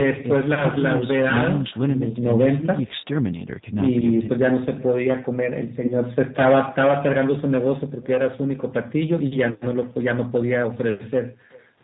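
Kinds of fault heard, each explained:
Echo with no canceller: The far end's loudspeaker output is picked up again by its microphone and returned uncancelled, so each stretch of speech is trailed, roughly 0.4 s later, by a faint copy about 26 dB down, thinner than the original. On a waveform, small ghost envelopes follow each burst of speech. On a spectrogram, weak, smeared repeats of the harmonic patterns sit just after the main ones throughout the clip.
G.729 codec: Throughout the speech, the damage is plainly audible: a rough, slightly synthetic quality, and nothing above 4 kHz. This comes from the coder rebuilding each 10 ms frame from a vocal tract filter, a pitch predictor and a handful of pulses, which points to an 8 kbit/s G.729-family codec. A spectrogram shows a hard ceiling at 4 kHz, with blurred, slightly irregular harmonics and formants below it.
VoIP packet loss concealed by the speech codec: At 0.54–0.66 s and 5.86–5.95 s, the decoder fills a gap by extending its last pitch and filter state at falling gain. 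The result is a brief buzzy tone or coloured noise that fades, followed by weak or distorted speech as the decoder recovers. Each gap is about 30 ms, which fits a single lost packet. The waveform shows a dip with unnaturally regular cycles, and the spectrogram shows frozen, flat harmonics that fade.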